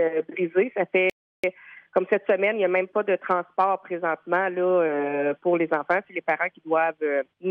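At 1.10 s the sound cuts out in mid-flow. Silence holds until 1.44 s, a gap of about 0.34 s. This is a playback stall. The break is abrupt, with no fade on either side. It is long enough to register as a hole rather than a click. The likely cause is the player running short of data, or its output thread being blocked, so nothing reached the output until it recovered.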